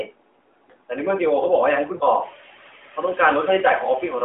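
Noise suppressor artifacts run through the whole recording. The background pumps down between phrases and back up under the speech.

From 0.04 to 0.91 s, speech is cut by the noise suppressor. The suppressor mistook the opening sound for noise and pulled it down by up to about 19 dB, so it comes out swallowed and faint. This is level loss, not the dropout of a missing frame.

At 1.96 to 2.03 s come lost AMR speech frames. About 40 ms is missing, which fits two 20 ms frames. The decoder stretches the last sound and fades it into a short warbling dip, a smeared concealment rather than a clean gap. It lands right as the room noise rises, around 2 s.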